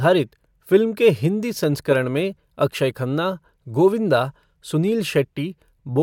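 Nothing in the speech stood out as a technical fault on listening.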